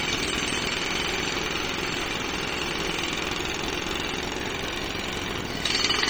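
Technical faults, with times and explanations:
Throughout: MP3 compression. The encoder was likely starved of bits, consistent with a very low bitrate around 33 kbps, so it discarded weak frequency lines whenever they seemed unimportant. Those lines drop in and out from one frame to the next, giving the sound a plainly audible watery, swirling texture and sharp onsets that smear instead of landing cleanly.
Throughout: filter restarted on every block. The filter loses its memory at each block boundary and starts from silence, so every block opens with a small transient. The blocks repeat at 375 Hz, which fits a 128-sample block size, and the transients fuse into a steady 375 Hz buzz under the audio. The buzz gets louder and quieter with the signal, since each transient scales with the level entering the filter.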